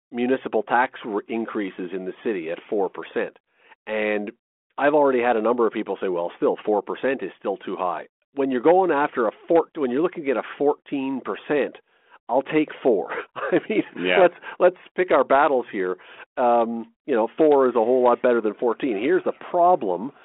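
No faults found: the speech sits in a telephone band of roughly 250 Hz to 3.4 kHz, carried by G.726 ADPCM at 32 kbit/s with only a light coding texture, as expected for that rate.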